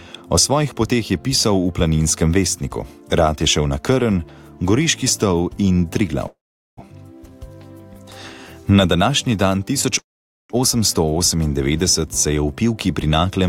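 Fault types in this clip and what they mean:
Call audio freeze: packets were likely delayed in transit, emptying the jitter buffer, so the receiver stretched the last sound into a fading buzz or hiss, then silence. At 6.27 s and 9.99 s this inserts gaps of about 0.5 s. Nothing is lost, and playback resumes later.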